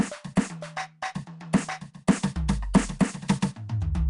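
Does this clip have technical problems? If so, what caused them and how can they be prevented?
Yes. Throughout the music there is a rough, hissy halo and a smeared, watery quality, and nothing sounds above about 10.7 kHz. This is likely Nellymoser compression, the old Flash microphone codec. It codes short blocks with very few bits, so weaker bands get none and are filled with noise, and the damage fits a bitrate around 44 kbps. To prevent it, encode music with a modern codec such as AAC or Opus at a generous bitrate.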